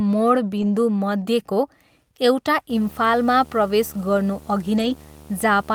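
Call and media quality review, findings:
Lost packet rebuilt from error correction, 0.57 to 0.67 s: no gap, but a short rough, noisy patch. About 60 ms rebuilt, consistent with three lost 20 ms packets replaced by low-bitrate in-band copies. Jitter buffer/network path.

Lost packet rebuilt from error correction, 4.77 to 4.91 s: same signature, a grainier, noisier stretch of about 80 ms, fitting four separate lost packets. Decoder played the reduced copies.

Video or display buzz, 2.7 s to end: steady 75 Hz buzz with hash above, roughly 25 dB below the speech. Display or video cable coupling into the audio input, buzzing at the screen's field rate.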